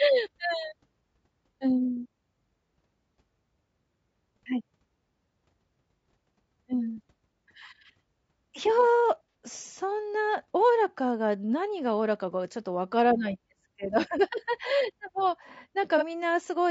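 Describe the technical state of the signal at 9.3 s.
At 9.34 s there is a brief AAC frame loss with concealment. About 60 ms of audio goes missing, which fits two lost frames. The decoder covers the hole by reusing the last good spectrum with scrambled phase. The result is a short smeared, noisy patch rather than a clean gap. It is too brief to fade toward silence, so it passes as a momentary blur in the speech.

Underneath, the speech carries plainly audible coding damage throughout. This is likely low-delay AAC compression, AAC-ELD, at a rate that sounds near 32 kbps. The voice sounds rough and grainy, with noise filling the spaces between harmonics. The top band sounds dulled and somewhat synthetic. This roughness surrounds the concealed patch at 9.34 s.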